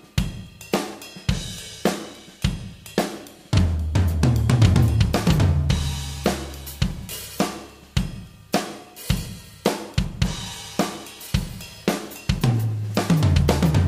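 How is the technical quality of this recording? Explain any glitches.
Nothing here glitches: there are no dropouts, clicks or other technical faults to point to anywhere in the recording.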